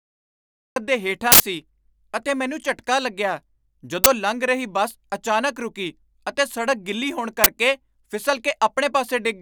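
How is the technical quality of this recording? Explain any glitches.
The recording has two kinds of technical fault: a cut-off start and three bursts from an uninitialised buffer.

Cut-off start: the file holds digital silence from 0 to 0.76 s, then the speech begins abruptly mid-sound at 0.76 s, because capture began late. The waveform shows a flat line jumping straight into the speech, and the spectrogram shows a hard vertical edge with no gradual attack.

Uninitialised buffer: loud glitches occur at 1.32–1.40 s (80 ms), 4.04–4.06 s (20 ms) and 7.44–7.46 s (20 ms). Each time, a block was played before audio had been written to it, so leftover memory came out as samples. On the waveform these are abrupt blocks of unrelated samples. On the spectrogram they are broadband columns across all frequencies.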